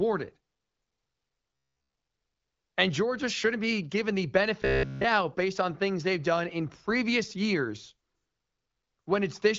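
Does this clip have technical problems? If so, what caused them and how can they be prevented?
Yes. Robotic sound from repeated short buffers occurs from 1.54 to 1.94 s and from 4.62 to 5.04 s: the speech collapses into a rigid, metallic buzz at 66.7 Hz, likely because audio arrived late and a segment of about 15 ms was looped in place of the missing audio. On a waveform, identical 15 ms cycles repeat; a spectrogram shows evenly spaced horizontal harmonics 66.7 Hz apart. Larger jitter buffers and steadier network delivery prevent it.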